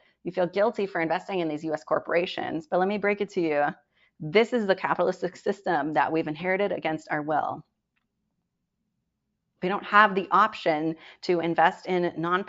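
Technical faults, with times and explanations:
Nothing technical stands out in this speech recording; there's no fault to point to anywhere along it.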